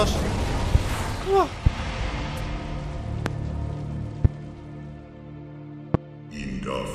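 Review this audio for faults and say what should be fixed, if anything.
Five loud pops sit on top of the sound, at 0.75–0.77, 1.66–1.69, 3.26–3.29, 4.25–4.27 and 5.94–5.97 s. Each is a single short thump roughly 25 dB above the signal (the fourth a little softer) and is likely from an electrical pulse such as a switch, static or a driver glitch. Unlike a dropout click, the sound keeps running underneath without a gap. Secure connections, ground the equipment and update audio drivers.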